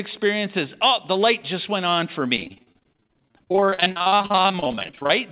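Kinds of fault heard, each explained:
Repeated packet loss (robotic sound): From 2.36 s, right after "just went on for", until 5.11 s, the audio keeps dropping out in dozens of short gaps, the longest 42 ms. Each hole is patched by repeating the last sound. Nearly half the stretch sounds choppy and robotic.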